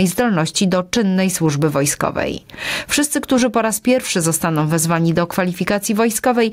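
Gain pumping runs through the whole clip. The level rises in every quiet gap and then drops under each loud sound, a swing of around 15 dB. The likely cause is input gain set far too high, with a fast limiter clamping down on peaks. Loud and soft parts sit squashed together.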